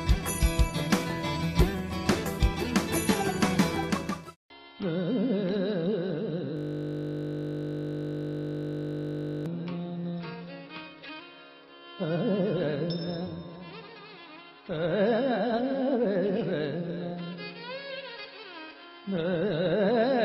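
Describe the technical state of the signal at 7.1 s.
At 7.1 s the audio is caught in a system hang loop running from 6.57 to 9.46 s: a frozen system lets the hardware replay one 20 ms buffer about 145 times, producing a steady 50 Hz buzz. Unlike a dropout, the sound persists, repeating identically rather than going silent.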